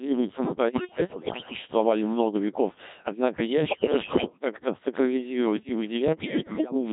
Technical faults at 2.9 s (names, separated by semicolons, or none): Codec 2 vocoder